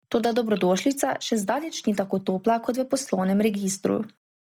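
From start to finish, the speech carries heavy codec damage, most likely Bluetooth LC3 compression at a low rate that fits about 32 kbps with 10 ms frames. Much of the upper spectrum has been discarded and replaced with synthetic noise, so the voice takes on a breathy, grainy edge. On a spectrogram the top band shows a smeared, uniform noise texture instead of distinct harmonics.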